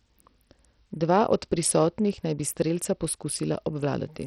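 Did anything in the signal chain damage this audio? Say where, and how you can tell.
Yes. Throughout the speech the treble is thin and unstable, flickering in and out, while a gritty, granular noise and aliasing cling to the voice from start to finish. The likely cause is Bluetooth SBC compression at the codec stage, working with a small bit pool: the weak upper sub-bands get few or no bits, and the remaining bands are coarsely quantised. Damage this heavy fits a bitrate around 64 kbps.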